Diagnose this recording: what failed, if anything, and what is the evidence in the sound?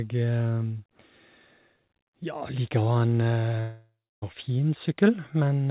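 Long network dropout, 3.6 to 4.24 s: 0.62 s of speech never arrives, bridged by a fading buzz or hiss then silence, likely from lost network packets.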